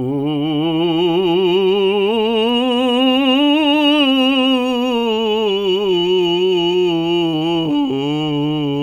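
At 5.83 s the music turns into a time-stretched section that runs to the end, playing at about 0.56 times its earlier pace while the pitch holds steady. The likely cause is software lengthening this passage by repeating short slices. It sounds dragging. On a spectrogram, harmonic lines stay at the same frequencies but stretch horizontally, while the waveform shows attacks spaced wider apart.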